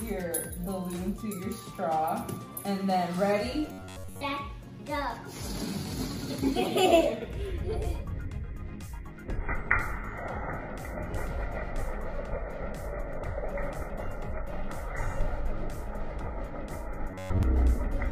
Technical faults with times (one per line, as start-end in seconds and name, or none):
3.67-4.23 robotic sound from repeated short buffers
17.11-17.43 robotic sound from repeated short buffers